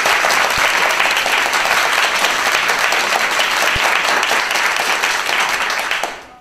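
An everyday-sound recording with an underrun with held sample at 3.76 s: a 4 ms flat hold at the last value, not silence, resuming where it stopped without lost audio, hence only a soft edge.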